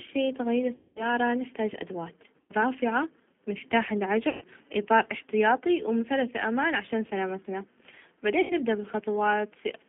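G.729 coding runs through the whole clip of speech: the 8 kbit/s codec rebuilds each 10 ms frame from a vocal tract filter, a pitch predictor and a few pulses. The line is cut to about 150 Hz to 3.5 kHz, and the roughness and synthetic edge are plainly audible.

VoIP packet loss concealed by the speech codec occurs at 0.75–1.14 s, 2.41–2.52 s, 4.29–4.44 s and 8.41–8.53 s, with about 210, 90, 120 and 90 ms of audio missing. The decoder stretches its last pitch and filter into a fading buzz, and the speech stays weak briefly after each gap.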